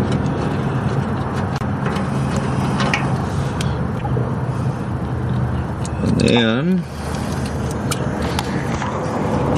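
Corrupt frames were decoded anyway, scattering energy to wrong frequencies: a loud chirp at 1.58–1.63 s, a softer burst at 3.97–4.05 s, and a brief blip at 7.91 s.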